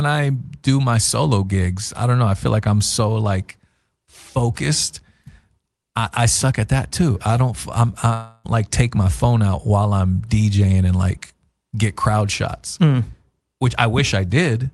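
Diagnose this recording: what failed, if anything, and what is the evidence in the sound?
At the network stage, packets likely stopped arriving from 8.13 to 8.47 s, a long network dropout right after "too I don't I'm". The receiver filled about 0.31 s with a fading buzz of the last sound, and the audio returns at "like take my phone" without the lost part.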